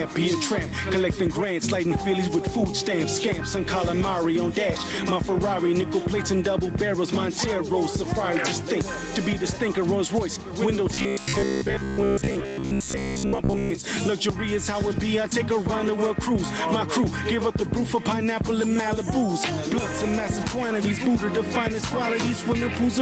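Right from the start there's gain pumping: the gain swings by roughly 10 dB around each loud moment, so everything sounds squashed. Likely the input gain is set far too hot, with a fast limiter clamping down.

From 10.9 to 13.7 s you get robotic sound from repeated short buffers, a stiff metallic buzz at 66.8 Hz. That's likely roughly 15 ms chunks looped to cover late audio, with most of the real signal in that stretch skipped. Meanwhile, the call path's 8 kHz ceiling is there throughout.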